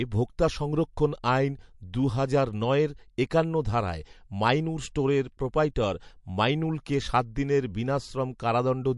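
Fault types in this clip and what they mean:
MP3 compression: speech throughout is band-limited at 11.3 kHz with plainly audible watery, swirly artefacts, likely from a low bitrate starving the encoder of bits.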